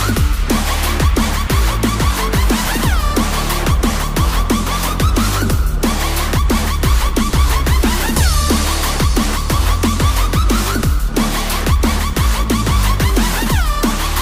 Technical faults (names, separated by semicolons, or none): none